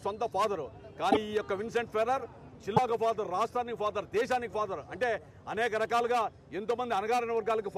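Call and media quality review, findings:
Brief glitches at 1.11–1.17 s and 2.76–2.79 s, roughly two frames and one frame long at 26.1 ms per frame. Likely a broken MP3 bit reservoir: frames dropped upstream, so following frames read borrowed bits from the wrong frame's bytes. Unlike packet-loss concealment, nothing is smoothed over; playback skips ahead and the first decoded frames come out corrupted.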